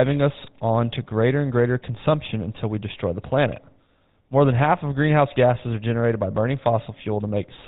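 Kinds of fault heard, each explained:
GSM full-rate codec: The speech carries a plainly audible buzzy, gravelly roughness across the whole clip, with a dull, boxed-in tone because nothing reaches above 4 kHz. This is the original GSM phone codec, whose 13 kbps rate the sound fits. It rebuilds the voice from a vocal-tract model excited by evenly spaced pulses that keep only one sample in three, so the fine texture of the voice is replaced by a coarse, grainy buzz.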